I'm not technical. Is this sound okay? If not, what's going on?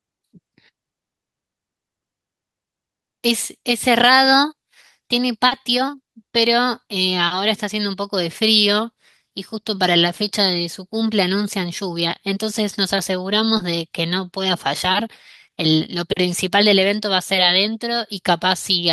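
No. Twice, at 5.47 s and 13.57 s, there is short concealed packet loss: a moment of speech, 40 ms and then 20 ms, arrived too late and was patched over. Unlike a dropout, it leaves no silence, only a brief smear or blip.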